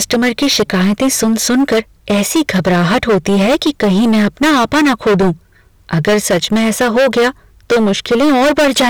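Hard clipping runs through the whole speech clip: overdriven by about 19 dB, roughly a fifth of samples hit the ceiling and get flattened, giving a harsh fuzz on every loud syllable.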